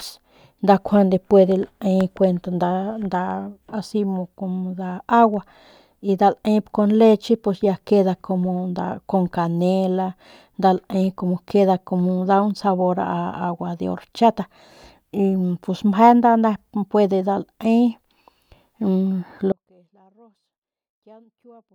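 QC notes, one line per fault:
19.52 s to the end: audio dropout to a faint residue. The speech cuts out abruptly mid-flow and never returns. For the last two seconds or so, only a faint trace of sound remains, roughly 35 dB below the normal level. The step is sudden rather than a fade or natural pause, and the path stays live underneath, which points to a likely loss of the wanted feed upstream rather than a muted or closed channel.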